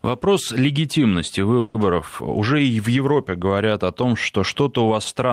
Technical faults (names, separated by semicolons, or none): call audio freeze